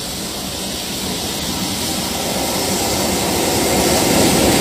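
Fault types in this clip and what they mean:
Damaged data in a compressed stream: a couple of corrupted chunks in the encoded data trip up the decoder, which loses its place and has to hunt for the next good frame. You get a quick glitch at about 1.4 s and a much longer one from 3.77 to 3.82 s.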